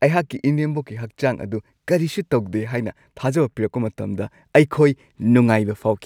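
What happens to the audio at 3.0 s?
Nothing goes wrong at 3.0 s; the speech carries on intact through that moment, with no dropout, click or distortion.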